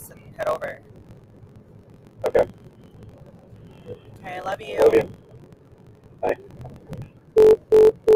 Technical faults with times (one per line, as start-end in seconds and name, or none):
0.00-8.15 block size mismatch (truncated)